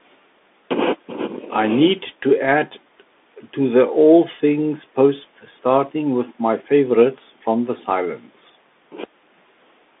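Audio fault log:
Throughout: Bluetooth CVSD headset codec. The speech is squeezed into a phone-style band of roughly 250 Hz to 3.6 kHz, so it sounds thin and boxy with no air on top, which fits a 64 kbps CVSD headset link. That codec sends one up-or-down bit per sample with a step size that adapts, and here the damage is plain: a grainy hiss sits under the speech, and the step size can't keep up with sharper sounds, so they come out gritty and rough.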